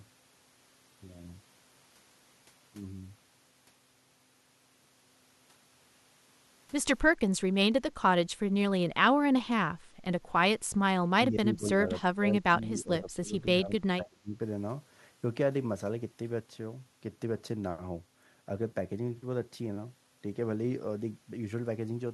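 At 7.52 to 7.59 s the speech dips by about 20 dB, then from 11.05 to 14.4 s it sinks by about 25 dB in broken stretches. This is likely speech suppressed in double talk, with the echo canceller turning down its own talker. Unlike a network dropout, the level ducks rather than going fully silent.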